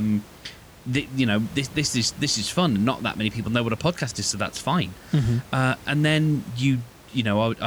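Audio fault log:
No faults heard in this speech recording.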